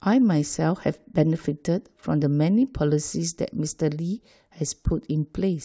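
Speech recording, no technical faults detected.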